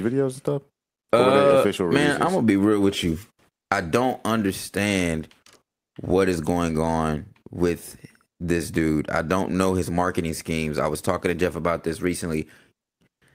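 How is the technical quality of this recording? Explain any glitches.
The technical quality of the recording is sound, with no glitches to explain.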